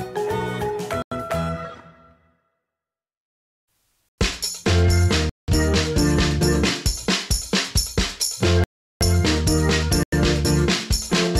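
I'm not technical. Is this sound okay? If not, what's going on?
No. The program producing this audio probably fell behind and left chunks empty, which is called a block of digital silence. The sound drops out abruptly at 1.02, 4.09, 5.29, 8.64 and 10.03 seconds. Most gaps last about a tenth of a second, but the one at 5.29 lasts about two tenths and the one at 8.64 lasts nearly four tenths.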